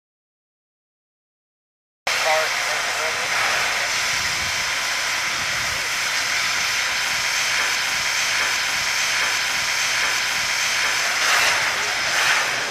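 The audio is already in a dropout to silence when it begins, and the silence lasts until 2.07 s. The gap is silent with no room tone or hiss, which sets it apart from a quiet passage or a fade. The likely cause is a lost input while recording continued.

From 7.75 s to 11.0 s a broken-record loop repeats one 0.81 s fragment four times back to back. Each pass is identical and does not decay, unlike an echo. This points to a stalled player or stream likely resending its last buffered piece, so the intended audio is lost.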